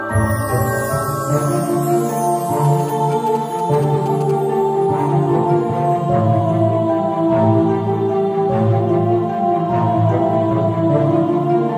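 From 2.65 to 4.31 s you get GSM signalling bursts: that galloping dit-dit-dit of short buzzes sitting roughly 20 dB under the sound. A 2G phone nearby was sending brief clusters of radio bursts, the handshake traffic it fires off before a call or message comes through, and the audio circuitry rectified them into the signal. The buzz repeats at about 217 Hz, the GSM frame rate, which is the giveaway.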